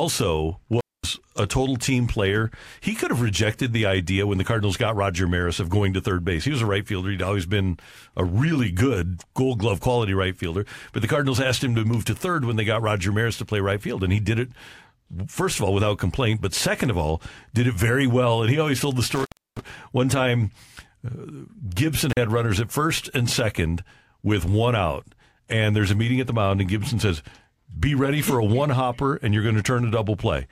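An intermittent contact drops the speech out three times: from 0.65 to 1.19 s with the line open for about 230 ms, from 19.15 to 19.65 s open for about 310 ms, and from 22.10 to 22.17 s open for about 40 ms. A loose plug or cable momentarily breaks the signal path, so the sound vanishes abruptly with crackle at each edge and faint hiss while open. The waveform shows flat gaps bracketed by sharp spikes, and the spectrogram shows blank bands bounded by vertical broadband streaks.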